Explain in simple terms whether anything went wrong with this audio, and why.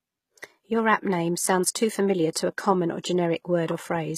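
The speech was likely squeezed with HE-AAC compression, which stores only the lower sounds and rebuilds the treble as a rough copy. Throughout the clip, s sounds come out gritty and metallic, and nothing survives above about 15 kHz.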